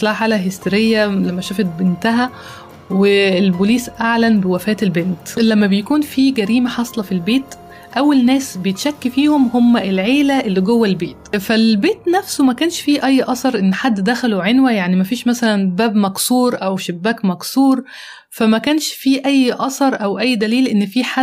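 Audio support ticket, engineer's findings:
Gain pumping throughout. Level swings of roughly 5 dB, ducking on each loud sound and recovering after it. Likely input gain set far too high, with a fast limiter or compressor pulling it down. Follows the sound moment to moment, unlike slow AGC drift.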